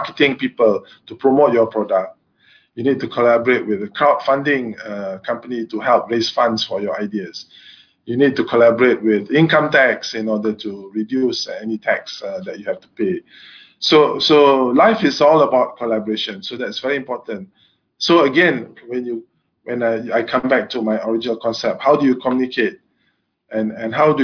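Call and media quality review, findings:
No audible faults found; no defects to log.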